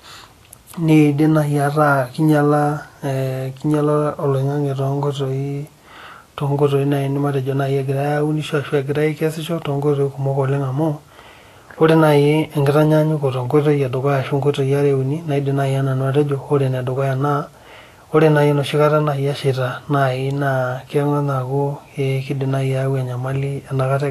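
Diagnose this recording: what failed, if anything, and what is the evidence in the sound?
Codec stage: likely Vorbis compression near 35 kbps cuts everything above 14.2 kHz and turns treble into coarse hiss, leaving the speech grainy throughout.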